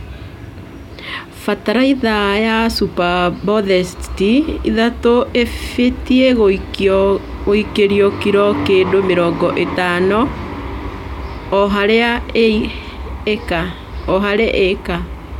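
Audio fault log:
No audible faults anywhere in this recording.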